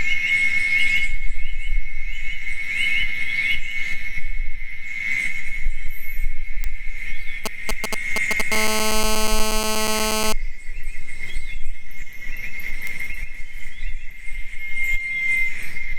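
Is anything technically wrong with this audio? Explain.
Yes, there are three kinds of fault.

At 6.64 s and again at 12.87 s there is a bit error spike: a single flipped bit pushes one sample to about -8 dBFS before it snaps back. Each is heard as a sharp, isolated tick. It shows as a one-sample needle on the waveform and a thin full-height vertical line on the spectrogram.

From 7.46 to 8.42 s come GSM signalling bursts. A nearby 2G phone exchanging signalling sends brief groups of radio bursts, which the audio circuitry rectifies. The result is a galloping dit-dit-dit of short 217 Hz buzzes, a little below the sound's level. The spectrogram shows clustered blocks of stacked harmonic lines.

From 8.52 to 10.33 s a GSM phone buzz follows as the phone moves into a call. It transmits continuously at 217 bursts per second, and the rectified pulses give a hard, raspy 217 Hz buzz about 6 dB below the sound. 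The spectrogram shows steady horizontal lines at 217 Hz and its many multiples, and the waveform shows a regular pulse train.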